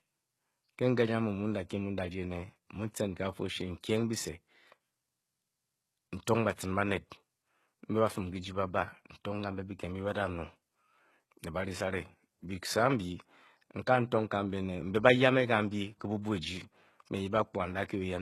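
Throughout, the speech has gritty, lispy s sounds and nothing above 12.3 kHz. This is likely HE-AAC compression. Copied lower bands stand in for the treble.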